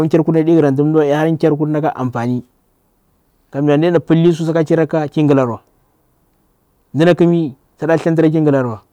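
Some stage in the chain overloads and hard clipping flattens the speech peaks: about 2 dB over at 0.14–0.60 s, a 1 dB tick at 0.98 s, about 3 dB at 3.69–4.30 s before "su saka", about 5 dB at 7.01–7.25 s, and about 2 dB at 7.92–8.48 s. Each event adds a brittle crackle on loud syllables.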